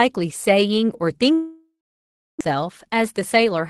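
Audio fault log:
1.33 to 2.43 s, long network dropout: the sound stops arriving and the receiver stretches the last bit into a fading buzz, then about 0.66 s of near silence before audio returns. Roughly 0.6 s of real content is simply gone, likely from a network outage.
2.54 to 3.60 s, jitter buffer speed-up: after the gap the buffer is holding extra audio, so the receiver trims tiny pitch-period slices over and over. The speech runs about 5% faster at unchanged pitch, shedding roughly 70 ms, and feels slightly rushed.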